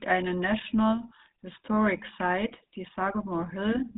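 A buzzy, gravelly roughness runs through the whole speech clip, with nothing above about 3.8 kHz. That points to the GSM full-rate codec, which fits its 13 kbps mode: a vocal-tract model excited by coarsely spaced pulses, plainly audible here.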